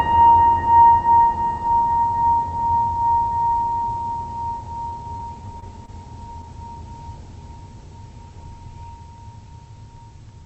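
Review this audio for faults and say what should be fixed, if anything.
Repeated packet loss (robotic sound) runs from 4.89 to 5.90 s. Several short dropouts, the longest about 20 ms, are each patched by extending the preceding music, giving a choppy texture over an audio band that stops near 8 kHz. To prevent it, stabilise the network path and enlarge the jitter buffer, or enable forward error correction.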